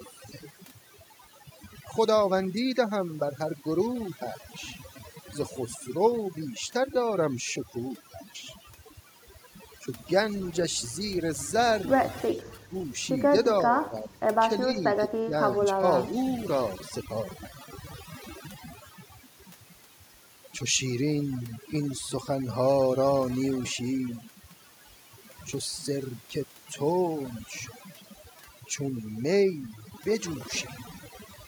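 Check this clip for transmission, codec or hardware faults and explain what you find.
Two faults are audible in this speech.

Overdone noise removal runs through the whole clip. The denoiser is set so hard that any frequency band near its noise estimate is pulled almost to nothing, taking quiet speech detail with it. The background drops and breaks up into twinkling specks. A spectrogram shows black gaps between scattered isolated dots.

Speech suppressed in double talk shows up as dips at 12.26–12.75, 13.72–14.2, 14.65–14.78, 14.97–15.01, 15.22–15.33 and 15.76–15.84 s. The likely cause is an echo canceller that mistook the talker for loudspeaker echo while both sides spoke and turned the voice down, by about 5 to 20 dB. The voice briefly sinks and fragments. These show as sudden notches in the waveform envelope and faded bands on the spectrogram.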